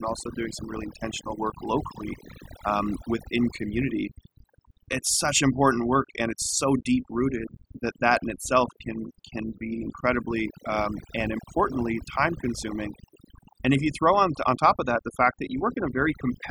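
A noise reduction stage set far too aggressively has been applied across the whole of this speech recording, a case of overdone noise removal. Frequency bands that sit close to the processor's noise estimate are pulled down hard or switched off, and the quieter components of the voice are caught along with the noise. The background drops away and breaks up into twinkling specks.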